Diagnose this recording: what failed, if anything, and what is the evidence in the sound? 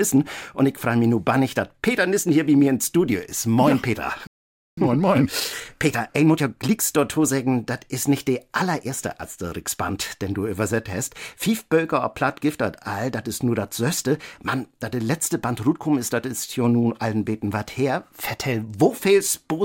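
The failure is at the playback stage. At 4.27 s the audio halts mid-flow and the output goes silent for 505 ms, resuming at 4.77 s. This is a playback stall, likely the player's buffer running dry or its output thread being blocked.

From 4.77 s to 6.79 s the audio runs hurried at 1.25 times normal speed while keeping its original pitch. This is time-compressed catch-up. The player cuts out short pieces and cross-fades the joins to clear the backlog left by the stall.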